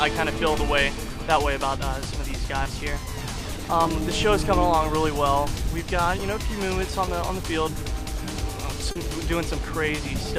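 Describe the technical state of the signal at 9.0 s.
Just before 9.0 s the signal carries a short concealed packet loss, spanning 8.91 to 8.97 s. About 40 ms of audio failed to reach the decoder in time, and the receiver bridged the gap by extrapolating the preceding sound, repeating its periodic structure or substituting shaped noise, before cross-fading back into the received stream. The result is a brief smear or wobble in the sound, with the signal returning to received audio by 9.0 s.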